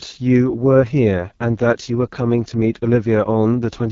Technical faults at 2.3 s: AMR wideband (HD Voice) codec

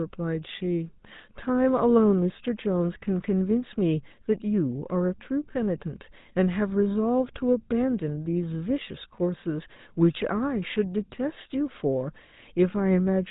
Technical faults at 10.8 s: GSM full-rate codec

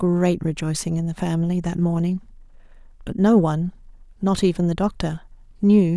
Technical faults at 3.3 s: none

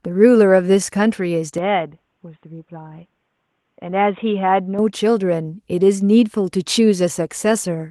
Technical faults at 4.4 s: input switched to a poorer device

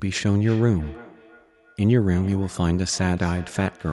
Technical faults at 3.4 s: feedback echo between two devices

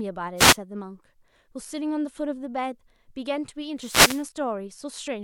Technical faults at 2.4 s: none

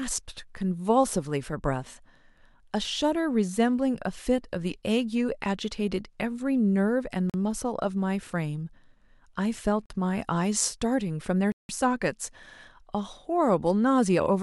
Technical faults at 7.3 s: block of digital silence

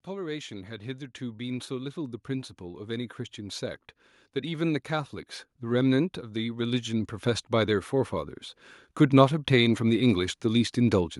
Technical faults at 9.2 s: automatic gain rising

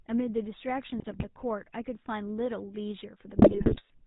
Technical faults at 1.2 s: GSM full-rate codec; GSM bit errors

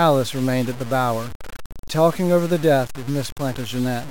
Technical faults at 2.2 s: low bit depth without dither

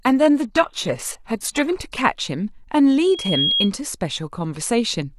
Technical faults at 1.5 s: adaptive stream starting at a low bitrate

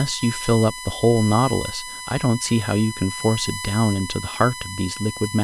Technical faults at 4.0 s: USB whine

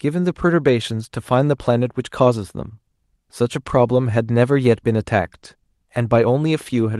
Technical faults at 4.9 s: none

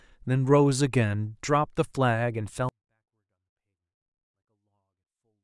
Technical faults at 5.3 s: 24-bit alignment error (too quiet)

